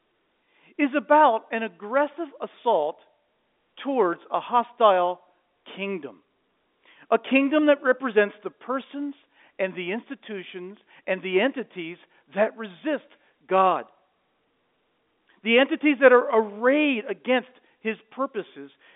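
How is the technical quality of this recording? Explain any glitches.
The technical quality is sound, with no glitches to explain, just the narrow band of an ordinary G.711 telephone line.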